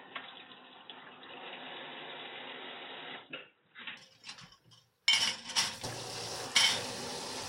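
From the start to 3.97 s the sound is band-limited, with nothing above 3.8 kHz, so it comes across as dull and boxy, with a faint added noise floor roughly 45 dB below the signal. At 3.97 s the full bandwidth returns abruptly, with no gap and no noticeable jump in level. That pattern points to an input switched to a poorer device, likely a different microphone or a headset's narrowband call profile, before the system changed back to the better input.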